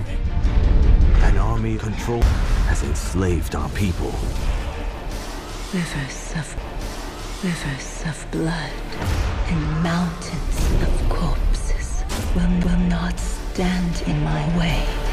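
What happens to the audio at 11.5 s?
Nothing goes wrong at 11.5 s: the audio there plays through intact, with no dropout, click or other fault.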